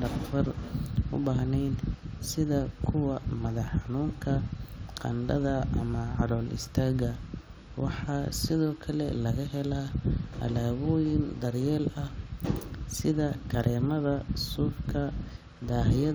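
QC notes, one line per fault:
No audible faults on this speech recording; nothing to log.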